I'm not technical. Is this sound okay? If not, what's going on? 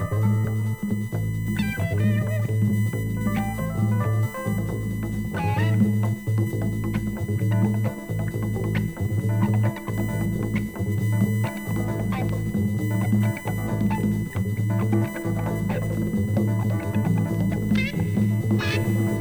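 No. Electrical noise from a USB connection is leaking in, causing USB whine: a steady, fairly noticeable high-pitched tone near 1 kHz, strongest at 2 kHz, throughout.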